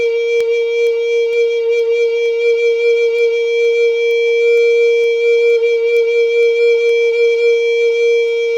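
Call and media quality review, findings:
Digital receiver unlocked from sender's word clock, drift around 50 ppm; single-sample slips cause word clock ticks in the music roughly every half second, 0.41–8.28 s.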